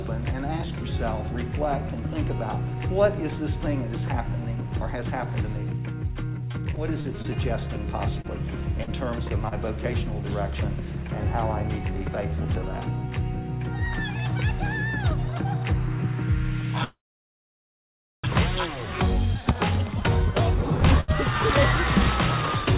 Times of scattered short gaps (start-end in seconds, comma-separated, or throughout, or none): 8.22-9.55